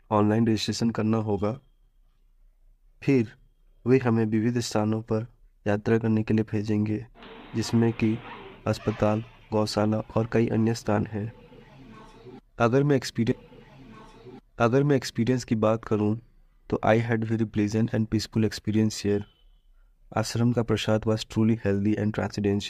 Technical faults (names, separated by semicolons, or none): stream segment repeated